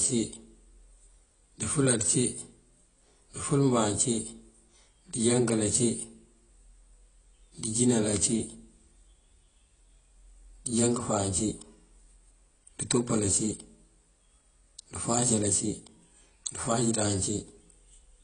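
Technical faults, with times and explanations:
Throughout, AAC compression: nothing above 9.7 kHz, leaving the speech dull and smeared, with a warbling, fizzy edge on sibilants. This likely comes from AAC-LC at a rate fitting about 24 kbps, where the encoder lowers its cut-off and quantises coarsely.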